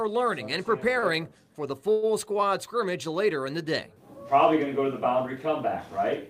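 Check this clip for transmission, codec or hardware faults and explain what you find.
Two transmission faults are audible, both brief hold-ups in the incoming audio.

From 0.99 to 1.05 s there is a short stall from a late packet. The sound at that point is held too long, about 30 ms, with a buzz or dip. A packet missed its slot, the jitter buffer ran empty, and the receiver stretched the last sound until the packet arrived. Nothing is lost, but everything after runs 30 ms later.

From 1.92 to 2.05 s there is a call audio freeze. The last sound carries on as a buzz or hiss that fades, filling about 106 ms without dropping to silence, then the audio resumes where it stopped. The likely cause is packets held up in transit draining the jitter buffer, so a 106 ms gap is inserted rather than anything being cut.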